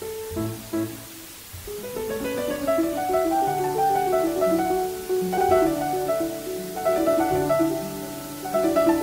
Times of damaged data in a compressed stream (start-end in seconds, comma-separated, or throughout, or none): 5.34-5.38